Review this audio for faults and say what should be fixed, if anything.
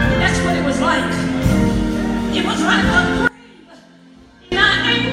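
Audio dropout to a faint residue, 3.27 to 4.52 s: an abrupt cut to a faint leak about 25 dB down, likely a signal break with the path still live. On the waveform it is a sudden thin band; on the spectrogram, a faded strip with hard edges. Secure and monitor upstream connections so a break is caught during recording.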